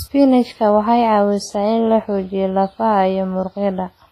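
Throughout, the speech has likely been through heavy WMA compression, consistent with about 24 kbps. This leaves ringing, washy smearing, a breathing hiss and nothing above 15.3 kHz.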